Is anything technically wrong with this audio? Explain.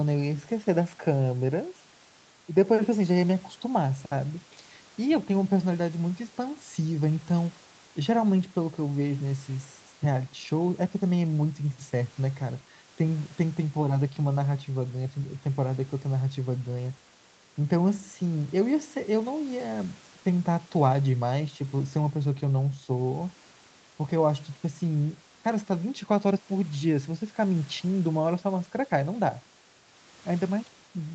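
No, nothing here is faulty: the speech carries no content above about 8 kHz, which is simply the band limit of the call path it went through and not a defect.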